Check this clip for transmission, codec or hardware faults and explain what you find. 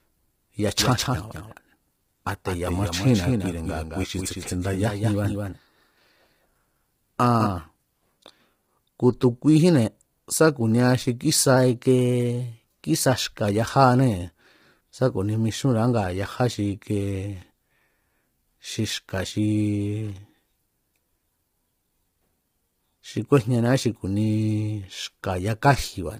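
There are three problems here, and one of them runs through the whole clip.

From the start, the speech sounds rough and grainy, with noise filling the gaps between harmonics and a thin, synthetic-sounding top end. That's heavy low-delay AAC compression, likely AAC-ELD. Its short frames resolve pitch poorly, and the damage fits a low bitrate of around 24 kbps.

There's a doubled audio track from the very beginning until 7.46 s. A second full-band copy trails the original by about a fifth of a second and sits about 5 dB quieter. It's dry, with no room colour, and cuts off abruptly. This is likely a second capture path or an edit holding two copies out of step.

The drift correction steps show up twice. From 2.67 to 4.86 s, playback slows by 5.68% and the pitch drops about a semitone (101 cents). From 11.56 to 13.44 s, it speeds up by 5.68% and rises about 96 cents. Each time it snaps back afterwards. 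This is likely clock-matching software changing the rate to manage its buffer.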